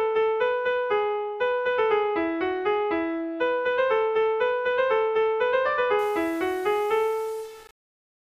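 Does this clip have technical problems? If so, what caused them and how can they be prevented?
Yes. From 5.99 s to 8.29 s the sound turns grainy, most likely from low bit depth without dither, with roughly 6 bits rounded so the distortion sits only about 25 dB down. Unlike dithered hiss, this grit tracks the sound and sputters on quiet passages. Keep a higher bit depth throughout and apply dither whenever reducing it.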